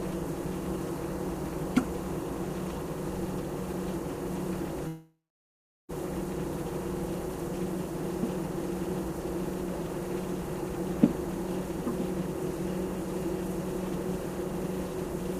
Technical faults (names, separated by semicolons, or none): long network dropout